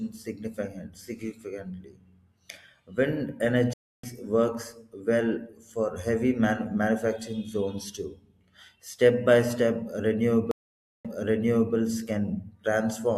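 At 3.73 s the speech drops out in a stream reconnect. The connection broke and the player restarted its decoder mid-stream. About 0.3 s of silence follows. Then the speech resumes slightly later, skipping a brief stretch. At 10.51 s a second reconnect occurs. The gap is longer, about 0.53 s. This time the server resent a burst, so playback resumes 0.7 s earlier and repeats speech already heard. Each restart comes back muted or faded in.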